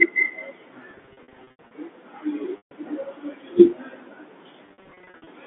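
From 0.91 to 1.71 s, packet loss with pitch repetition breaks the speech up. About 470 ms goes missing in runs of up to 80 ms. The receiver loops the last pitch period to fill each hole, so the sound turns briefly buzzy and held. At 2.57 to 2.71 s a single 140 ms gap fades toward silence. From 4.66 to 5.27 s, 390 ms of scattered losses buzz again, heard through the narrow telephone band.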